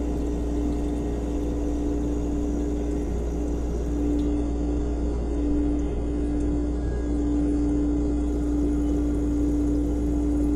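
From 4.26 to 8.26 s the adaptive stream switched to a lower bitrate, fitting low-rate HE-AAC; treble above 11.3 kHz vanishes abruptly, with no gap.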